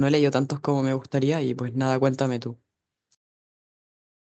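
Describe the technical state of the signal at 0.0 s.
At 0.0 s the speech is intact, with no fault present, only the ordinary character of the WebRTC call path passing through normally.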